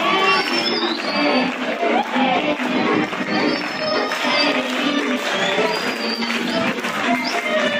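De-emphasis applied wrongly from 0.68 to 4.08 s: a treble-cut filter meant to reverse pre-emphasis acted on audio that never had any or had already been de-emphasized, rolling the top end off smoothly to about 8 dB down at 10 kHz relative to 1 kHz, so the sound turns dull and muffled.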